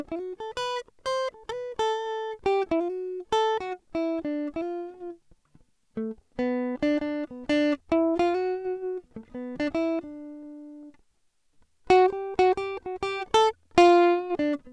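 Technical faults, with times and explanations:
No technical faults can be heard anywhere in the music; the signal holds steady throughout.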